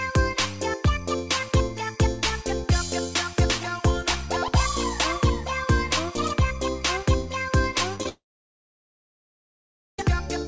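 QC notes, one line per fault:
7.96–8.06 s, repeated packet loss (robotic sound): four brief holes, the longest about 14 ms, are each patched by repeating the preceding sound, so 40% of this 0.1 s span is concealment and the audio turns choppy. On a spectrogram, short smeared vertical slices and repeated harmonic patterns break up the band-limited content below 8 kHz. In the waveform, near-identical copied cycles sit where fresh signal should be.
8.09–9.99 s, long network dropout: about 1.9 s of signal is missing, likely from audio that stopped arriving over the network. The last sound is briefly stretched into a fading buzz or hiss, and then roughly 1.8 s of silence follows before the audio resumes without the lost part. The spectrogram shows a short decaying smear and then a blank band, and the waveform collapses to a flat line.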